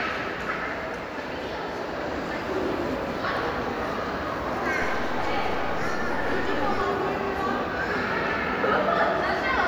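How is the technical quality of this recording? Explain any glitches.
The recording has one glitch, a DC step. At 4.82 s the waveform's zero line jumps by about -29 dBFS and holds until 6.81 s, when it steps back. Each jump is a low thump while the sound continues unchanged. A waveform shows the trace shifted off centre, and a spectrogram shows brief low-frequency smears at both edges.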